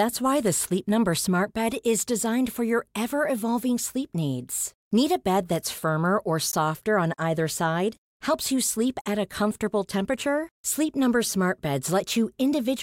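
Speech, with a block of digital silence at 6.52 s, between "bed that's firmer or" and "on either side". For about 15 ms the signal drops out and returns with no fade. The gap is too short to hear as silence and comes across as a tick or dip, which points to an output buffer that wasn't filled in time.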